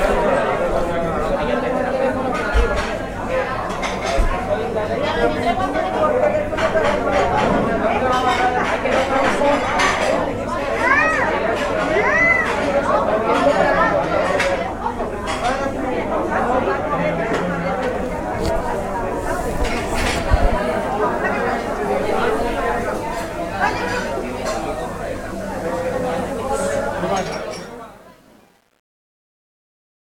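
The fade-out begins around 27 s and runs to the end at 30.1 s. From 27.19 s it shows truncation distortion on a fade. The gain stage drops low bits without dither, and the grain fits about 9 bits. As the level sinks, the waveform collapses into coarse square steps. The quiet tail turns gritty and buzzy. It is worst from 27.59 s to 30.06 s.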